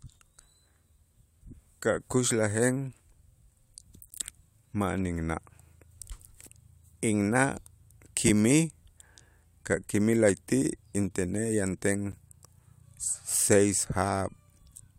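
Speech, broken twice by a gap between stream segments. Hard-edged silent holes occur at 4.10 s (about 16 ms) and 12.12 s (about 11 ms). Timestamps of adjacent 4-second segments leave a small gap, and the player fills it with silence. Nothing is lost.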